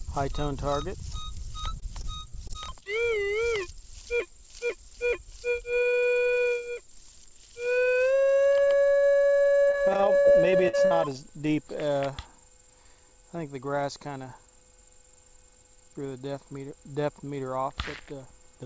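From 1.80 to 2.97 s, and again from 9.68 to 10.92 s, repeated packet loss (robotic sound) chops the audio: short holes, up to 22 ms and then 54 ms long, are filled by stretching the preceding sound. Unlike a single dropout, the gaps recur rapidly, giving a choppy stutter.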